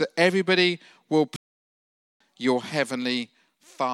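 A playback stall at 1.36–2.20 s, after "that everybody will", silences the speech for 0.84 s, likely because the player ran out of data.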